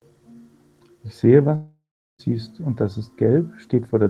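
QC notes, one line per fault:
1.55 to 2.21 s, long network dropout: the speech breaks off and the tail of the last sound is stretched into a buzzy, fading smear while the receiver conceals the gap, then about 0.36 s of near silence follows before the speech returns further on. Roughly 640 ms of the original audio is missing and never replayed, so the speech jumps ahead at resumption. The likely cause is a stall in packet delivery long enough to exhaust loss concealment.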